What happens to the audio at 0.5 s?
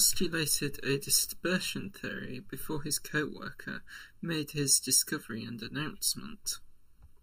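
Channel delay (comb filtering) runs through 0.5 s and the whole clip: one channel lags by under a millisecond, so the mono sum notches near 700 Hz and above, sounding hollow.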